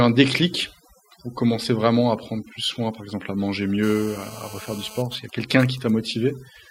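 Speech runs through the whole clip with overdone noise removal. The background has been pushed down and breaks up into twinkling specks. Quiet parts of the voice are removed with the noise. From 3.83 to 5.02 s a hard, raspy GSM phone buzz sits at 217 Hz with many harmonics, about 18 dB below the speech. It comes from a nearby 2G phone on a call, whose radio pulses the audio circuit rectifies. From 5.06 to 5.9 s, GSM signalling bursts follow as even ticks with a longer 217 Hz buzz twice a second, roughly 20 dB down. A nearby phone is on a call, but its user is silent, so it sends only short groups of bursts.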